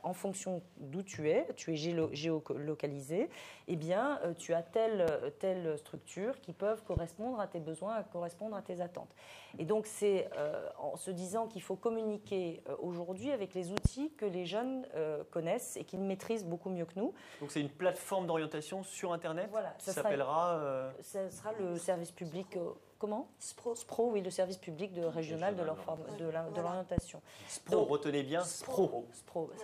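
Loud pop, 5.08 to 5.10 s: a sharp pop sits on top of the sound, which carries on beneath it, peaking around 15 dB above it. The likely cause is a sudden voltage pulse, from a plug, switch, static or driver glitch, entering the signal path. The circuits after it shape it into a brief thump.

Gap between chunks, 5.96 s: a short hole of about 7 ms cuts the sound. It repeats every 10 s, which points to audio delivered in 10-second chunks with silence left at each join. The cause is likely padding, or a player starting each chunk slightly late. Nothing is missing, but the flow breaks abruptly.

Loud pop, 6.97 to 6.99 s: another single pop at about 15 dB above the sound, likely from another voltage pulse.

Loud pop, 13.78 to 13.88 s: two pops in quick succession, the strongest here at around 25 dB above the sound, likely a double voltage spike.

Gap between chunks, 15.96 s and 25.97 s: the same roughly 7 ms dropouts at the next 10-second boundaries.

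Loud pop, 26.98 to 27.00 s: a single pop around 20 dB above the sound, likely another voltage pulse.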